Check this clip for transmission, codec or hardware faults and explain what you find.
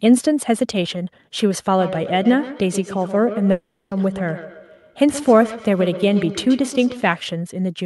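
Two faults here, one overlapping the other.

Feedback echo between two devices, 1.73 to 7.21 s: the sound comes back roughly every 150 ms, thinner and ringing, peaking about 12 dB under the speech. A second device in the room replays the far side, and the canceller on the device picking it up can't remove that.

Long network dropout, 3.51 to 3.93 s: the sound turns into a fading buzz and then goes quiet for about 0.3 s. When it resumes, roughly 0.4 s is simply gone, likely from packets that never arrived.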